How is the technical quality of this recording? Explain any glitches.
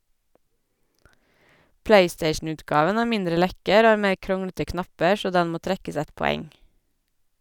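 No glitches or technical faults are audible here.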